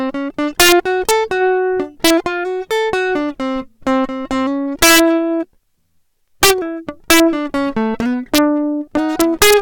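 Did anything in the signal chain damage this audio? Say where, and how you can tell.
Yes. A gain or summing stage in the sample-format path let values run past the integer ceiling and wrap to the opposite sign instead of saturating. This is integer overflow, and it cuts the music with violent cracks far harsher than clipping at 0.60–0.72, 1.09–1.11, 2.05–2.10, 4.82–5.00, 6.43–6.51, 7.10–7.20, 8.35–8.38 and 9.20–9.54 s. Peaks were overdriven by about 1 to 7 dB, and each crest beyond the limit flips across the full range.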